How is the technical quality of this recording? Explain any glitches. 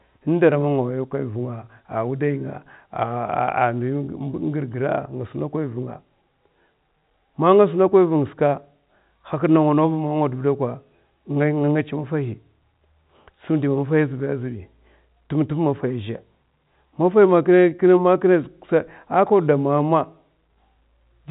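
No glitches turn up anywhere in the recording; it's ordinary telephone-band speech carried by G.711 telephone coding, so the sound simply stops at around 3.8 kHz, within that format's 4 kHz limit.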